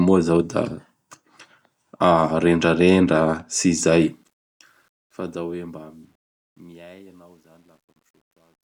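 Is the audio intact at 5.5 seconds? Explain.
No. At 5.5 s the fade-out is already affected by truncation distortion on a fade, which runs from 4.03 s to 8.73 s. The fade is processed at only about 10-bit resolution without dither, so the falling waveform collapses into coarse steps. This adds a gritty edge that is worst from 5.83 s onward.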